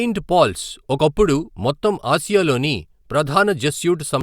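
No technical faults are audible.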